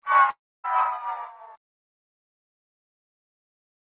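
At 0.3 s the sound dissolves into a fading buzz and goes silent for 270 ms until 0.66 s. That's likely a long network dropout, costing 340 ms of audio.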